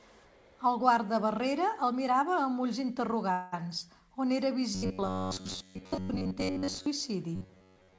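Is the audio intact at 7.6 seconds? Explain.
No. At 7.6 seconds the speech is inside a stretch of robotic sound from repeated short buffers, running from 7.36 s to the end of the clip at 7.99 s. It is likely caused by late-arriving audio, with the receiver looping a fragment of roughly 10.7 ms while the real signal is skipped. Most of the audio in that span is repetition. The loop imposes a fixed 93.8 Hz buzz, giving a rigid, metallic tone over the 8 kHz-limited call audio.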